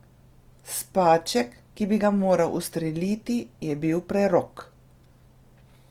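Throughout the speech, the signal has most likely passed through Opus compression at a low bitrate, consistent with about 24 kbps in its music-oriented CELT mode. With too few bits, the encoder keeps each band's overall energy but rebuilds fine detail from folded lower bands or noise. The result is plainly audible: voiced sounds turn rough and grainy, with a noisy texture over the harmonics, while the bandwidth stays full, reaching up to about 20.2 kHz.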